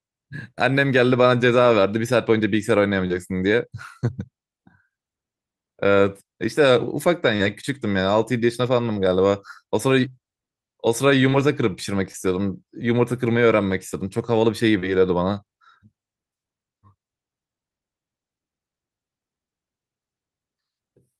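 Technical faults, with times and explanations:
3.07 s, 7.36 s, 8.93 s, 11.29 s, 12.11 s and 14.80 s: short concealed packet loss. About 20 ms of speech failed to arrive in time at each point, and about 40 ms at 7.36 s. The receiver bridged each hole by extending the preceding sound, then blended back into the real audio, so each one is a brief smear or wobble rather than a silent gap or hard click.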